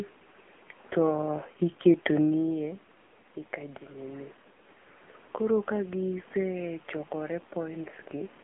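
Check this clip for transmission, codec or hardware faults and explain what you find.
Two faults are present: narrowband mobile coding across the whole clip, and automatic gain rising near the end.

Throughout, the speech carries AMR narrowband mobile codec damage. The vocal-tract model is driven by a pitch predictor and sparse pulses in each 5 ms, and the heavy buzzy, synthetic quality points to a low bitrate around 6.7 kbps. Nothing above 3.5 kHz survives, and the low end thins out below about 200 Hz.

From 5.66 s to 8.39 s, automatic gain rising is audible. The input level drops by about 15 dB, and the gain control responds by slowly lifting its gain about 3 dB. Voice and room noise swell together over those seconds, unlike the level change from the talker moving near 2.0 s.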